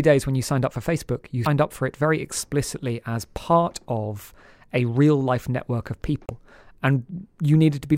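At 1.43 to 1.47 s, just before "up for it very", and again at 6.26 to 6.30 s, right after "real life network of", the speech breaks up briefly for about 44 ms. This is damaged data in a compressed stream: corrupted bytes make the decoder misread those frames and lose sync until it finds a valid header.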